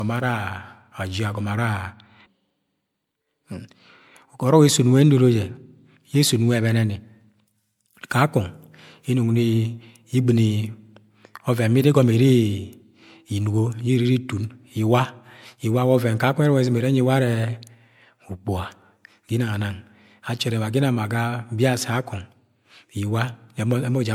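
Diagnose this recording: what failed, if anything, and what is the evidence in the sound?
Codec stage. The speech sounds swirly, smeared and hollow throughout, with blurred attacks. Generation loss, likely from a few repeated MP3 passes near 96 kbit/s.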